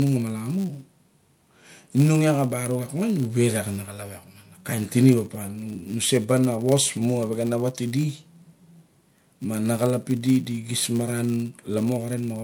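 Filter restarted on every block, throughout this speech recording: each block's filter begins from silence and leaves a small transient, giving a 100 Hz buzz that tracks the speech level and points to blocks of about 10 ms.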